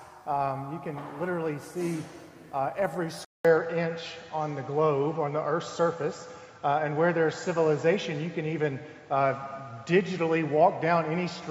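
An input switched to a poorer device at 3.25 s, after a 200 ms silence, likely a change to another microphone. From there to the end, nothing reaches above 7.6 kHz, so the sound turns duller. The level shifts by about 5 dB, and a new background noise sits about 45 dB down.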